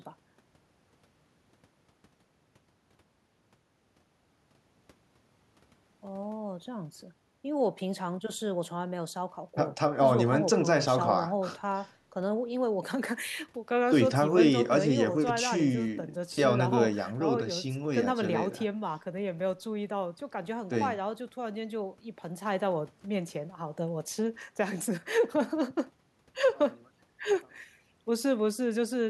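Nothing in this speech recording points to a technical fault at any moment, so there's no problem to flag here.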